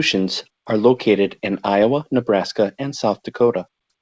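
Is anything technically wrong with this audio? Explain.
No, nothing technically wrong can be heard in this speech. It has come through a call path, and the band stops at about 8 kHz, which points to a wideband call codec such as G.722.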